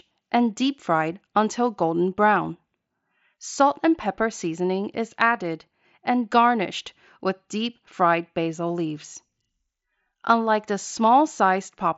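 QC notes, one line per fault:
Nothing to flag here, just speech carried over a Bluetooth mSBC headset link, with the top end stopping around 7.7 kHz as that wideband path does.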